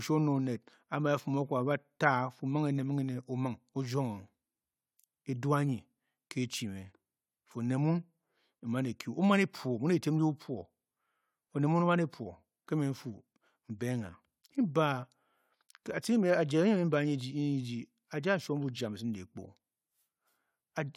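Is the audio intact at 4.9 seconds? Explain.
Yes, at 4.9 seconds the speech is intact, with no audible dropout, click, distortion or other fault at that point.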